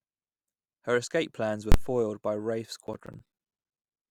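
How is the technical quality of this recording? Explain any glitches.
The recording has two clear glitches in this speech take.

At 1.72 to 1.74 s, between "escape plans are" and "foiled by", there is a single loud bang. These are invalid numbers at full scale: a block of about 23 ms, which fits a 1024-sample block, was pinned to maximum level.

From 2.87 to 4.03 s, regular ticks recur every 64 ms. These are periodic USB or driver dropouts. Roughly twenty gaps of around 10 ms each were replaced by silence while the interface was blocked.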